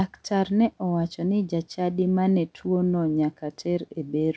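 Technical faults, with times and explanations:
No technical faults found.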